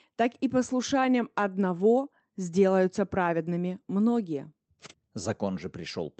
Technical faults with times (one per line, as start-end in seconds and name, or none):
none